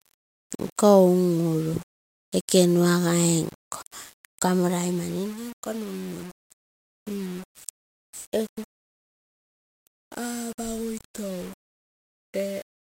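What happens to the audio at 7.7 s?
At 7.7 s the speech carries the same grainy distortion heard across the whole clip. The fault is low bit depth without dither, likely from rounding to about 6 bits. With so few levels, the rounding error tracks the waveform rather than forming a steady hiss. It sits around 25 dB below the speech. Quiet passages turn gritty, and the softest parts sputter or drop out between adjacent steps.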